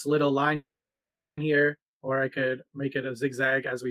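A call audio freeze runs from 0.55 to 1.39 s. The last sound smears into a brief fading buzz, then drops to silence for about 0.73 s of the 0.82 s gap. The audio then resumes exactly where it broke off, with nothing skipped, so everything afterwards lands 0.82 s late. The likely cause is packets stalling in transit until the jitter buffer ran dry, leaving the receiver to pad the wait rather than drop content.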